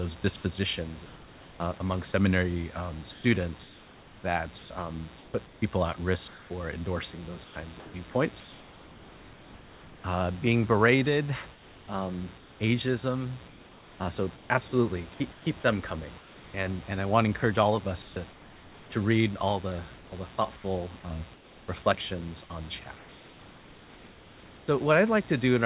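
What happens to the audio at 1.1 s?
A steady, raspy mains buzz sits under the speech at 1.1 s and runs unbroken through the whole clip, roughly 25 dB below the speech. Switching spikes at twice the 60 Hz mains rate leak into the signal, stacking harmonics up to the call's 4 kHz ceiling.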